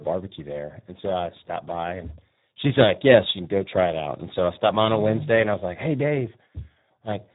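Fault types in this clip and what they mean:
Speex codec: Heavy CELP coding leaves the speech hoarse, buzzy and edging toward robotic, which fits a low setting near 8 kbps, with nothing above 3.8 kHz. Unlike a plain low-pass filter, the excitation itself sounds rough and noisy, not merely muffled.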